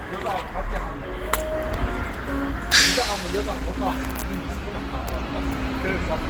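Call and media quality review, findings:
Opus compression artefacts, whole clip: sound heard muffled, hoarse and grainy, with plainly audible codec damage. Content still reaches about 20.3 kHz. Likely a low-rate Opus encode in hybrid mode, consistent with roughly 16 kbps, filling starved bands with noise.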